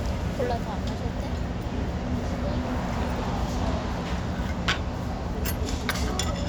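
No technical faults are audible.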